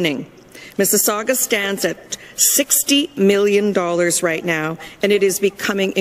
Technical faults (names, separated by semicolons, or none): none